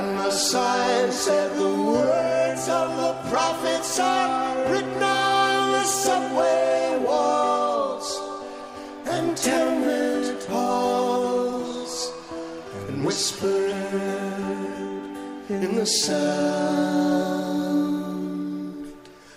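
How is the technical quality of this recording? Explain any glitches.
No glitches can be heard; the signal runs continuously with no dropouts, clicks, distortion or other technical faults.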